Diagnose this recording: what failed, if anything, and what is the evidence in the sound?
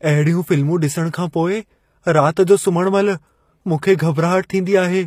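The codec stage is at fault throughout: HE-AAC compression is the likely cause. The treble above the core band sounds synthesised, s sounds come out gritty and metallic, and nothing is left above 15.5 kHz. Unlike a plain low-pass, the top end stays bright but inharmonic, pointing to a low bitrate near 24 kbps.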